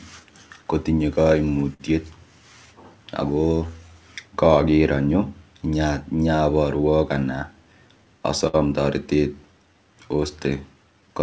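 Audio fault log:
Throughout: clock drift between sender and receiver. The sending clock runs roughly 5% slow, so the receiver's buffer keeps draining and must be padded out. On a spectrogram, syllable spacing looks slightly uneven, and the whole timeline sits marginally longer than expected.
0.20–11.09 s: repeated timing corrections. The receiver keeps stretching short pieces, playing at about 96% speed and adding somewhere near 0.4 s overall. Heard as a faintly dragging, unsteady tempo. In the waveform, occasional duplicated cycles and slightly elongated segments appear at irregular spacing.
1.74–1.82 s and 8.47–8.55 s: short stall from a late packet. Each time the buffer ran empty and the last sound was held for 58 ms and 62 ms, then resumed with nothing lost. On the spectrogram each shows a brief flat, smeared band with a slight buzzy texture or dip, below the G.722 path's 8 kHz ceiling.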